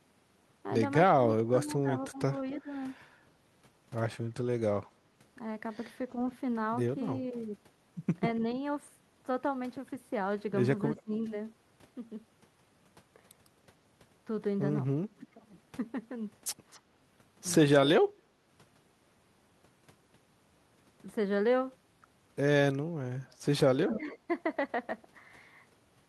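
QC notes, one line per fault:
1.15–24.17 s, speech suppressed in double talk: the voice dips or breaks up at 1.15–2.69 s (deepest about 20 dB, roughly 0.7 s affected), 10.95–11.13 s (about 20 dB), 15.13–15.45 s (about 15 dB) and 23.86–24.17 s (a milder dip of about 5 dB). This is likely an echo canceller that, with both ends talking at once, could not tell the near talker from loudspeaker echo and attenuated everything together.
2.55–24.17 s, echo leak: a faint delayed copy of the voice surfaces at 2.55–2.61 s and 10.96–11.01 s about 272 ms late, and at 16.72–16.78 s and 23.93–24.17 s about 256 ms late. It sits around 25 to 30 dB below the speech, rising to about 20 dB below in the last, longest scrap. The likely cause is a far-end loudspeaker whose echo canceller let residual pickup return down the line.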